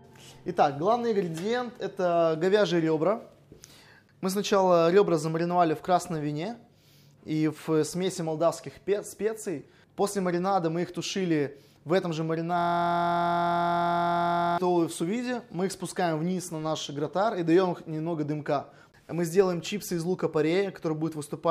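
At 12.59 s the audio locks into a system hang loop until 14.58 s. The system stalled while the hardware kept replaying one 23.22 ms slice, which fits a 1024-sample buffer, so you hear a steady buzz at about 43.1 Hz.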